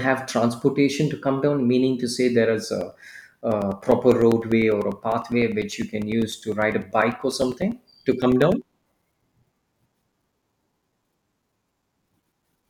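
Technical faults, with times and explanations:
2.81 to 12.63 s, periodic USB or driver dropouts: regular ticks every 0.1 s through the speech, as a few milliseconds of audio repeatedly drop to silence while the bus is blocked.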